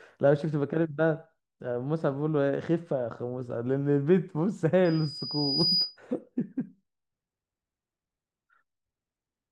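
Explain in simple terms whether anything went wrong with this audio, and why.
Loudspeaker feedback squeal appears from 4.85 to 5.97 s. A high, piercing tone near 4.9 kHz rises over about a second until it is louder than the speech, then stops. The microphone was picking up the loudspeaker it was feeding, so the sound went round and round in a loop. At this one pitch, each trip came back a little stronger than the last, and the tone kept growing on its own into a squeal.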